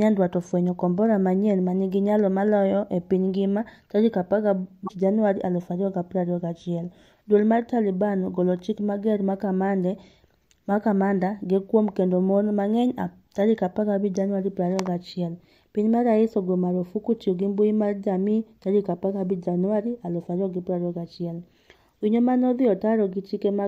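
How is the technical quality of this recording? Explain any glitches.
One glitch stands out in this speech recording. From 4.85 to 4.91 s there is damaged data in a compressed stream. Some bytes in the encoded file were corrupted. The decoder misread those frames, lost sync, and hunted for the next valid frame header. The result is a brief glitch lasting about 60 ms.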